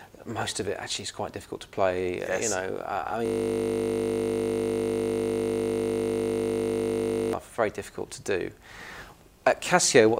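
From 3.26 s to 7.33 s the audio locks into a system hang loop: the machine froze while the hardware kept replaying the same 20 ms ring buffer, about 200 times over, so you hear a steady 50 Hz buzz instead of the sound.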